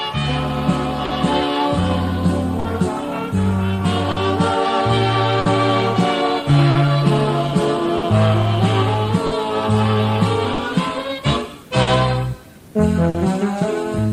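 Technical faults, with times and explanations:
Throughout: clock drift between sender and receiver. The sending clock runs roughly 4 percent slow against the receiver, so the jitter buffer keeps draining and the receiver must repeat short pieces to keep playing. The result is recurring small timing hiccups at uneven intervals, a stutter in the flow. On a spectrogram, brief repeated slices appear as slightly stretched or duplicated patterns. In the waveform, short segments look copied end to end, with occasional discontinuities at the joins.
1.05 to 13.16 s: scattered short gaps. About ten small holes, spread one here and one there, were patched by continuing the preceding sound. They total around half a second, the longest near 50 ms, covering roughly 4 percent of this stretch, and they stretch the timeline by 29 ms. They are heard as brief ticks, smears or hiccups. On a spectrogram, each patch shows frozen, smeared harmonics. 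In the waveform, each patch is a short, repetitive, periodic-looking section.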